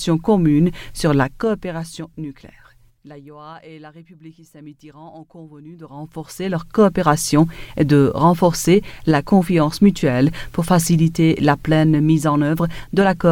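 From 1.11 s to 2.69 s the sound carries zipper noise: a level drop of roughly 25 dB is applied as a staircase of small jumps, around 50 per second, instead of a continuous ramp. Each jump leaves a tiny discontinuity in the waveform, so a fine buzzy ticking rides on the sound only while the level falls. A smooth fade would take the same drop silently. Here the texture stops once the level settles.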